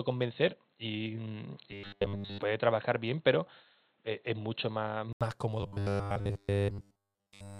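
From the start until 5.21 s the speech is dull and boxy, with faint new background noise about 45 dB below the signal. An 80 ms silence, then a sudden return to full clarity at the same level, marks this as likely an input switched to a poorer device, rather than a steady filter.

From 1.71 to 2.42 s, and again from 5.61 s to the end, the speech becomes a rigid, metallic buzz fixed at 100 Hz. This is robotic sound from repeated short buffers, likely a 10 ms block replayed in place of missing audio. In the first stretch the real audio still breaks through in places; in the second the repeats cover everything.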